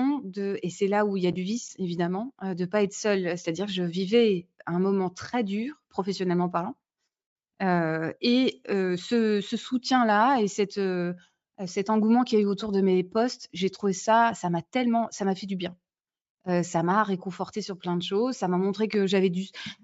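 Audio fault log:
The speech signal shows no technical faults of any kind.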